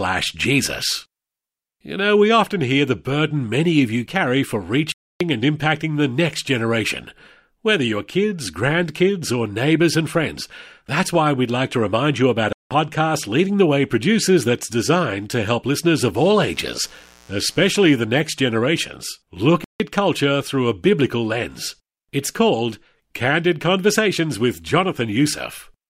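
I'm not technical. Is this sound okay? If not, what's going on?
No. The speech cuts out to silence three times, which is a Bluetooth stall. At 4.92 s, after "of you carry for", it drops for about 0.29 s. At 12.53 s it drops for 0.18 s. At 19.64 s, after "next generations look", it drops for 0.16 s. Each time the sound picks up again afterwards. The likely cause is wireless interference that delayed the audio on its way to the headphones, so playback paused until the missing data arrived.

From 16.14 to 17.99 s, starting after "to help listeners of", a steady, raspy mains buzz sits under the speech. It comes from electrical power leaking into the audio. Here it is built on 60 Hz, the power frequency, with sharp harmonics above it.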